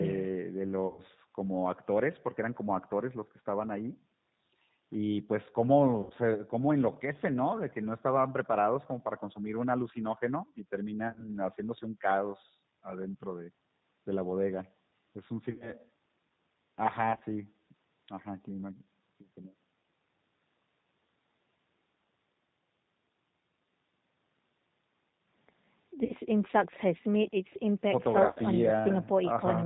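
G.729 codec, throughout: the speech is rebuilt at 8 kbit/s from a vocal tract filter, pitch predictor and sparse pulses, so it sounds rough and synthetic, with nothing above 4 kHz.

VoIP packet loss concealed by the speech codec, at 0.87–1.01, 6.03–6.13, 11.08–11.30, 15.51–15.73, 17.11–17.24, 26.05–26.14 and 28.28–28.39 s: the decoder extrapolates its last frame into a fading buzzy tone or coloured noise, and the speech stays weakened briefly afterwards.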